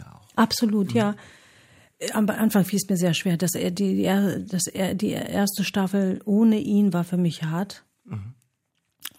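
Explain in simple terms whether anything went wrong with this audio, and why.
Nothing stood out as wrong when listening to this speech recording.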